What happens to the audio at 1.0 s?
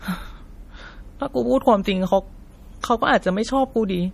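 At 1.0 s the speech has a watery, swirling texture, and the top end is missing: nothing is present above 15.2 kHz. This is not a moment-specific event, since the same damage runs through the whole clip. The likely cause is MP3 compression at a low bitrate, around 40 kbps. Short of bits, the encoder cuts the treble at a fixed point and drops quieter frequency components, which flicker on and off between frames and produce that plainly audible swirl.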